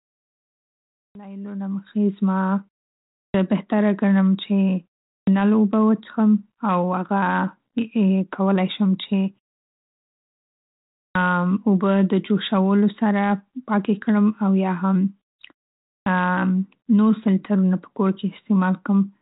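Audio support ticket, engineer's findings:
Clipped start after a pause: output device sleeping in silence and slow to wake or relock, so onsets after gaps of 0.38 to 1.77 s lose about 73 to 84 ms. Speech jumps in abruptly, first sounds missing, at 1.07, 3.27, 5.19, 11.08, 15.99 s. Band-limited telephone-style coding, consistent with 32 kbit/s G.726.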